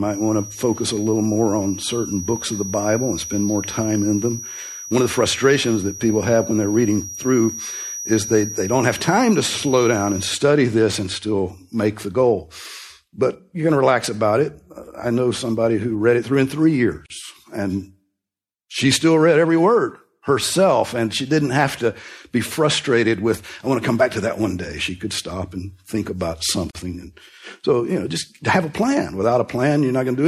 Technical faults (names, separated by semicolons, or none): MP3 compression; gap at a join of encoded pieces